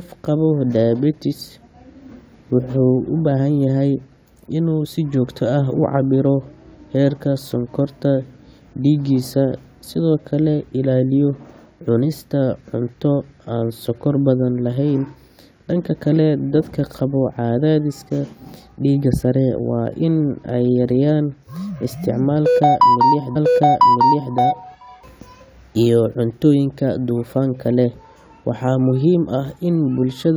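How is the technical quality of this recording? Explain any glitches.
The recording has one glitch, a repeated stream segment. From 23.35 s to 24.35 s, about 1.0 s of the speech plays a second time, because the player fetched or queued the same chunk of the stream twice and then resumed. You hear a small blip where playback jumps back, then a stretch of speech you've just heard. On a waveform, the envelope across that second matches the one just before it. A spectrogram shows the same harmonic and formant patterns twice in a row, with a thin vertical line at the splice.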